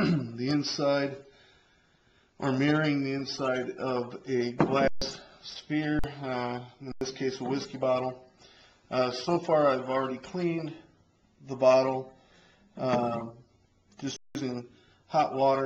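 Underrun with held sample occurs at 4.88–5.02 s, 5.99–6.04 s, 6.92–7.01 s and 14.16–14.35 s (about 139, 46, 93 and 186 ms). The output buffer ran dry, so the level freezes flat, then resumes past roughly that much lost audio. The durations fit 2048-sample buffer multiples.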